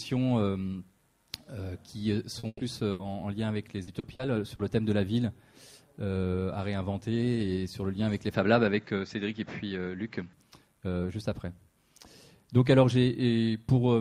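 A brief smear at 2.39 to 2.46 s is short concealed packet loss: about 40 ms of audio never arrived in time, and the receiver bridged the hole by extending the preceding sound before blending back into the real signal.

Right after, from 2.47 to 2.62 s, the audio holds and fades, with 30 ms of outright silence. It then picks up further along. This burst of packet loss dropped 120 ms, which the receiver filled by continuing the last sound at falling level. A second burst at 2.91 to 3.02 s repeats the effect over 80 ms, leaving that stretch missing.

Between 3.83 and 4.62 s the sound turns choppy. This is repeated packet loss producing robotic sound. Four separate gaps, none longer than 40 ms, were each patched by continuation, so about a fifth of that span is synthetic fill and 160 ms of real audio is gone.

From 8.34 to 10.33 s the sound goes duller, with nothing above 7.6 kHz, though the loudness stays about the same. 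A faint new noise floor sits roughly 50 dB under the signal, and there is no gap at the change. The likely cause is the input switched to a poorer device with a narrower band.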